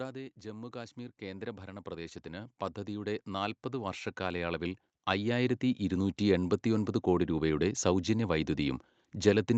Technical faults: automatic gain rising

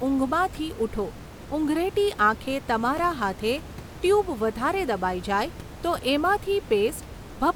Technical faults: none

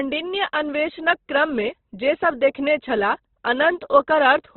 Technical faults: Opus compression

